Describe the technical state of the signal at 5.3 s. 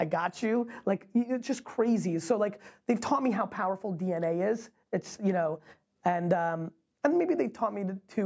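At 5.3 s the audio is intact, with only the ordinary call microphone processing audible as a lack of the lowest bass and nothing above 8 kHz.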